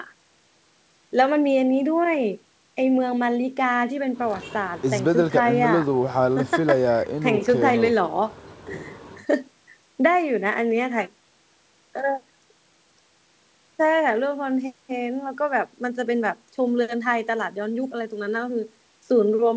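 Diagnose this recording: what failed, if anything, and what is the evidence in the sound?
Nothing failed: the speech comes through the call's microphone processing and a wideband G.722 call path at 64 kbps as expected, with the band ending around 8 kHz as that codec setup dictates, and no stage of the chain shows a fault in the sound.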